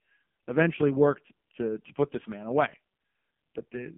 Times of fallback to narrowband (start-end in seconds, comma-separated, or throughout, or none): none